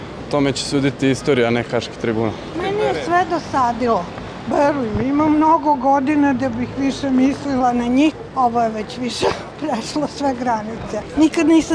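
From 4.49 to 7.60 s, the samples are clocked out slower than they were captured, with no conversion. This wrong sample rate fits 24 kHz material played at 22 kHz. The sound runs at 0.919 times its speed and drops 1.47 semitones, sounding lower and dragging.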